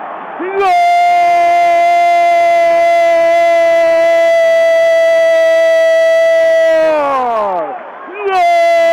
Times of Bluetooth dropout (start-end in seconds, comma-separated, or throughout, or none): none